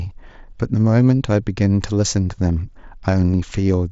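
Speech carried over what sounds like a Bluetooth mSBC headset link, bandwidth topping out near 8 kHz as that wideband codec allows, with no technical fault to report.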